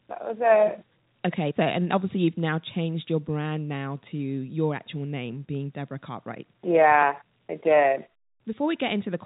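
Speech, with no technical fault to be heard. It has the narrow band of G.711 telephone coding, with nothing above about 3.8 kHz.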